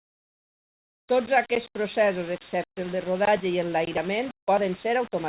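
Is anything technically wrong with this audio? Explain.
Yes. The speech has low bit depth without dither throughout. The error tracks the signal, so quiet passages and the tails of syllables turn gritty and grainy, and the softest bits sputter or drop out instead of fading smoothly. The grit sits only around 20 dB below the signal. That points to roughly 5-bit resolution, likely from rounding to a coarse step with no dither to decorrelate the error. The band-limiting to nothing above 4 kHz is just the call path's telephone-style bandwidth.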